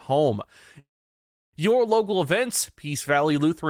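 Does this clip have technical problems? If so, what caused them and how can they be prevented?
Yes, there's a call audio freeze from 0.79 to 1.55 s. The sound stalls, a short fading continuation of the last bit is held over, and then about 0.68 s of near-silence follows. When it picks up again, it carries on exactly where it left off, so nothing is lost, but everything after runs roughly 0.74 s late. Likely cause: packets got held up in transit and the jitter buffer ran dry. A steadier network path, or a somewhat deeper adaptive jitter buffer, would prevent it.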